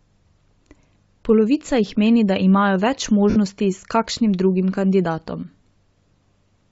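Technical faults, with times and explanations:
throughout: Bluetooth LC3 compression, likely. The speech appears to have passed through a low-bitrate LC3 link, the transform codec of Bluetooth LE Audio, with a frame rate that fits 10 ms frames and a grain consistent with roughly 32 kbps. At that rate the encoder discards much of the upper spectrum and the decoder fills those bands with noise, so the codec damage is plainly audible: the voice carries a breathy, grainy edge over its sibilants and upper harmonics.
3.30–3.37 s: lost LE Audio frames. Just after "meni da imajo več", about 60 ms of audio failed to arrive over the link, which fits six consecutive 10 ms frames going missing. The LC3 decoder concealed the gap by reusing the last good spectrum with randomised signs and fading it after the first few frames. The voice therefore blurs into a short noisy smear that loses its tonal structure and sinks in level before normal audio resumes.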